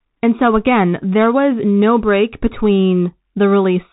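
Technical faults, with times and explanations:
Throughout, Bluetooth CVSD headset codec: the speech has been squeezed down to phone-call bandwidth with nothing above 3.8 kHz, which fits the 64 kbps CVSD link that headsets use. That codec sends just one bit per sample, a simple up-or-down nudge with a step size that keeps adapting. Loud high-frequency bursts outrun the step and break up, so s sounds come out scratchy, and a grainy hiss sits underneath the whole clip.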